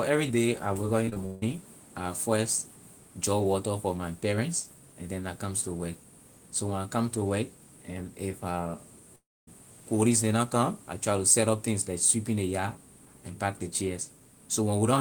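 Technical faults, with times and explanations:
1.05 to 1.44 s, repeated packet loss (robotic sound): just before "I first draw water" the audio breaks up into a choppy stretch. Four separate gaps open inside less than half a second, the longest about 160 ms, and each is patched by stretching out the last fragment that arrived. Roughly 220 ms is filled this way, over half the span, so the ear hears patched-over pieces in place of the real sound.
9.16 to 9.49 s, long network dropout: shortly before "colleague neh na come" about a third of a second of audio goes missing, likely because nothing reached the receiver for that stretch. The last sound is carried on briefly as a fading buzz, then most of the gap, around 260 ms, is plain silence. When the signal returns it simply resumes, and the lost portion is never heard.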